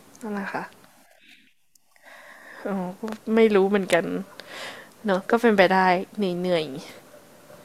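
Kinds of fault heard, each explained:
No faults detected in the speech; nothing to list.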